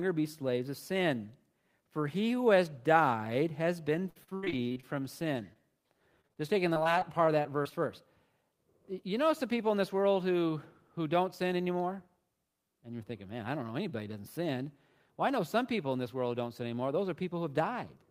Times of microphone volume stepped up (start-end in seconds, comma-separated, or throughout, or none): none